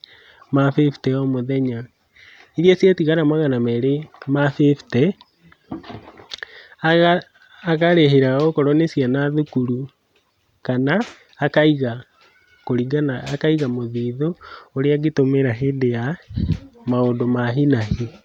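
No faults detected anywhere in the speech recording.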